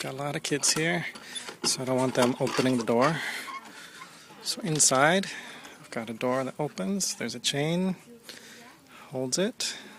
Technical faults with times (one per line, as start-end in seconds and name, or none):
none